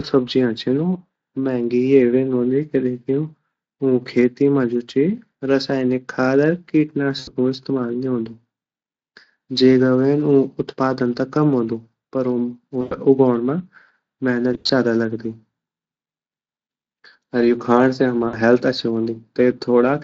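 At 7.19 to 7.30 s, 12.81 to 12.95 s, 14.53 to 14.70 s and 18.27 to 18.37 s, the speech shows VoIP packet loss concealed by the speech codec. Gaps of 80, 100, 120 and 60 ms, consistent with 20 ms frames, were filled by the Speex decoder extending its last pitch and filter. The result is a fading buzz, broken up at 14.5 s where the loss is scattered. A spectrogram shows smeared, repeated harmonics dimming. The waveform shows a decaying periodic envelope.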